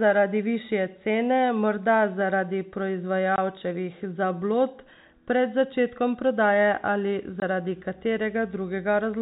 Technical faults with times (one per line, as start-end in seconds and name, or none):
3.36-3.38 packet loss filled with silence
7.40 packet loss filled with silence